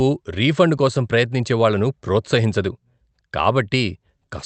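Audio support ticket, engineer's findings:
Nothing stood out on listening to the speech, which comes through the Opus call path at its expected bandwidth of about 8 kHz.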